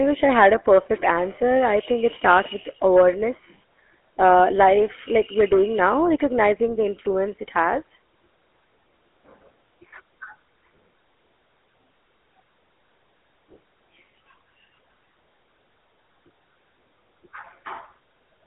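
From start to finish the speech has the buzzy, gravelly texture of the GSM full-rate codec, which fits a 13 kbps stream. It rebuilds the voice from a vocal-tract model driven by sparse pulses, so the damage is plainly audible, and nothing gets through above about 3.8 kHz.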